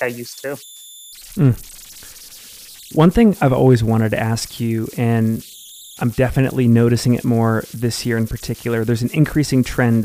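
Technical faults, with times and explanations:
Throughout: converter idle tones. A whistle near 4 kHz sits in the pauses between speech and turns into grainy noise under the speech, at about 25 dB below the signal. An undithered delta-sigma converter settles into repeating bit patterns when its input is small, and those patterns produce tones.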